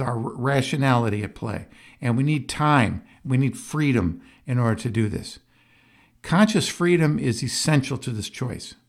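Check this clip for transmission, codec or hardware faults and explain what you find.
Nothing here points to a transmission, codec or hardware problem; the speech comes through steady and intact all the way along.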